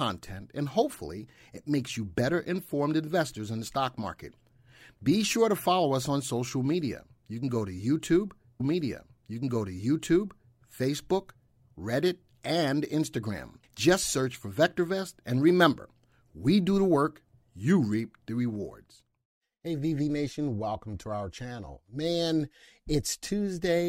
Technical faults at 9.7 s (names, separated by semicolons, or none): stream segment repeated